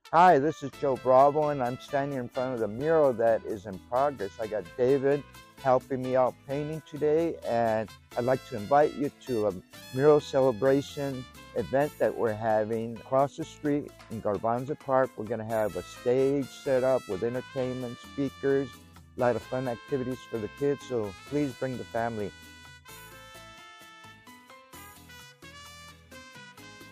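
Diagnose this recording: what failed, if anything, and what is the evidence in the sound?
Nothing in the recording points to a failure at any stage of the chain. No event, interruption or change in the sound stands out as evidence of a fault.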